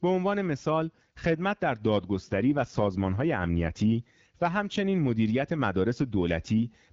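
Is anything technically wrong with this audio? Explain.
Yes. From 2.14 to 3.83 s there is an AMR rate drop: the codec switches to a lower bitrate and spends the freed bits on error protection. The audio turns rougher and more synthetic, which fits a step down from 12.65 to 8.85 kbit/s. On a spectrogram the band stays the same and there is no gap, but the harmonics blur into a grainier texture, and the waveform shows no break.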